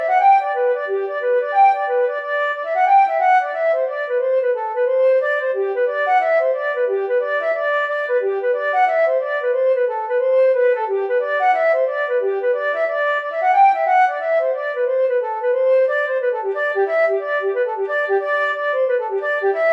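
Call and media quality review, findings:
No defects found on review; no fault to attribute to any component in the call or media path.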